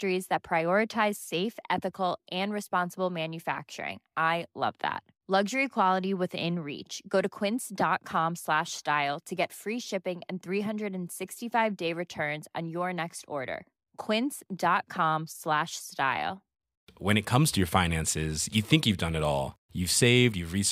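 No technical faults can be heard in this speech recording. There is nothing to place on the timeline.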